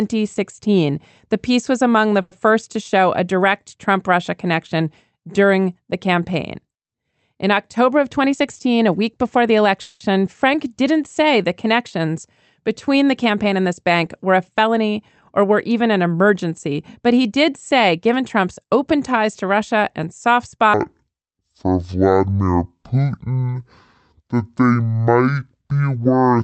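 At 2.21 s and again from 9.81 to 10.02 s, the speech briefly stalls into a short, fading buzz or hiss, about 100 ms the first time and 190 ms the second, and then picks up exactly where it stopped. Nothing is lost, but the gap is inserted into the audio. This is a call audio freeze, likely from packets held up in transit so that the jitter buffer ran dry and the receiver stretched the last sound until the audio resumed.

In three stretches, 8.19 to 9.70 s, 13.30 to 14.75 s (after "the connections between the", before "or were even an") and 17.06 to 18.93 s (after "were even an emergency", before "ties to"), the speech sounds slightly rushed while its pitch stays put. The rate is about 6% faster. This is jitter buffer speed-up. A backlog had built up, so the receiver trimmed many tiny pitch-period slices to catch up, removing roughly a tenth of a second in the first two stretches and about 0.15 s in the third.

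From 20.74 s, right after "and soft", to the end, the speech drops sharply to a slow, deep drawl, playing at 0.512 times normal speed and about ten semitones lower. This is a section at the wrong speed, likely replayed against the wrong clock, so pitch and tempo fall together. Throughout the clip the sound carries ordinary call-codec colouring, with the top end stopping around 8 kHz, which fits Opus on a WebRTC path.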